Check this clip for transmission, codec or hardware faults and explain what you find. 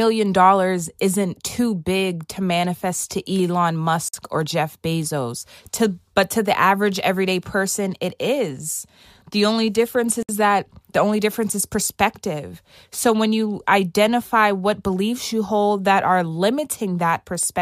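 Two gaps at joins of encoded pieces cut into the speech, at 4.09–4.14 s (50 ms) and 10.23–10.29 s (63 ms). Separately encoded segments were joined with each run's start delay and last-frame padding left untrimmed. The sound drops briefly to silence, then resumes exactly where it stopped. A waveform shows a flat stretch with slightly smeared edges, and a spectrogram shows a narrow blank vertical band.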